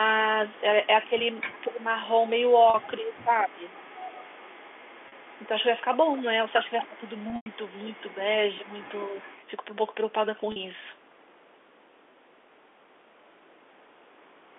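From 0.49 to 9.46 s an echo leak runs under the speech: a faint delayed copy of the voice, trailing by about 231 ms and sitting roughly 25 dB below it, most likely because a loudspeaker on the far end fed its microphone and the echo canceller failed to remove it. On a spectrogram it shows as weak ghost harmonics shifted about a quarter second right of each syllable, confined like everything else to the 300 Hz to 3.5 kHz telephone band.

Speech suppressed in double talk appears four times, where the echo canceller, likely confused by both sides talking at once, turned the talker down along with the echo. From 1.08 to 1.87 s about 300 ms of the voice sinks by as much as roughly 15 dB. From 2.99 to 3.65 s, and again from 6.86 to 7.03 s, the voice dips by about 10 dB. At 8.15 s there is a brief 5 dB dip lasting about 50 ms. The waveform envelope shows sudden notches, and the spectrogram shows the upper harmonics thinning within them.

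Packet loss with pitch repetition bridges 40 ms gaps at 2.70, 5.08 and 10.52 s, which fits two 20 ms packets each. The last pitch period is repeated, giving a short buzzy hold that looks like evenly spaced identical cycles in the waveform and flat, frozen harmonics in the spectrogram. Between 7.30 and 7.46 s, 120 ms of audio is lost across a 160 ms stretch. The longest run, 100 ms, fades into silence before the voice cross-fades back.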